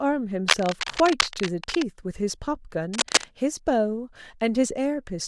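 From 0.48 to 1.83 s, cable scratch noise sits a little below the speech. Dense, uneven crackling rustles over it. A worn cable or connector being moved likely changed contact resistance rapidly. From 2.93 to 3.25 s it returns, about as loud as the speech.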